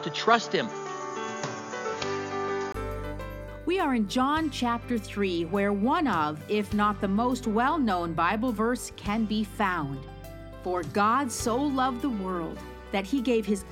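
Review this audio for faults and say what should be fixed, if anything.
Input switched from a poorer device, likely another microphone or a headset call profile, at 2.74 s. Until then the sound is dull and boxy, with nothing above 7 kHz and a faint added noise floor. A 20 ms silence follows, then clearer sound at a level shifted by roughly 5 dB. Locking recording to one fixed input device, with automatic device switching disabled, would prevent it.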